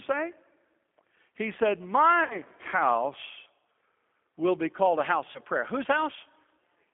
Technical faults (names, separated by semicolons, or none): G.729 codec; VoIP packet loss concealed by the speech codec